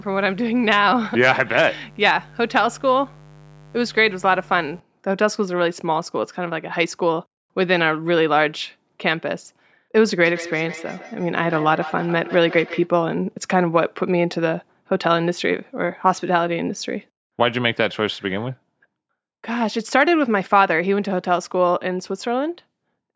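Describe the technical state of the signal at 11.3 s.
At 11.3 s the signal is inside a stretch of feedback echo between two devices, running from 10.25 to 12.91 s. Two devices on the same call share the room, so one plays back what the other's microphone sent and that microphone picks it up again. Neither echo canceller removes the other device's playback. The result is a thin, ringing repeat trailing the speech at an interval of roughly 150 ms, peaking about 14 dB below the speech itself.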